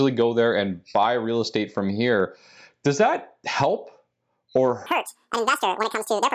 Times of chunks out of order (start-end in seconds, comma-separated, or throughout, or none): none